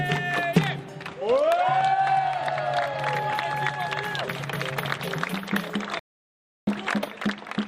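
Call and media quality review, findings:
Rebuffering stall at 5.99–6.67 s: playback drops to silence, then resumes at the exact cut point. About 0.68 s added, no content lost. Waveform shows flat gap, spectrogram a clean blank column. Player buffer underrun, stalled awaiting download.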